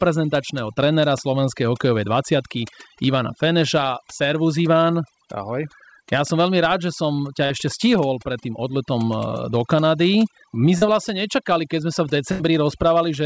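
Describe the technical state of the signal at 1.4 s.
At 1.4 s the background is near-silent, flecked with twinkling specks. This is overdone noise removal, present throughout the clip: an overly strong reducer pushes down single frequency bands near its noise estimate, stripping quiet parts of the voice too.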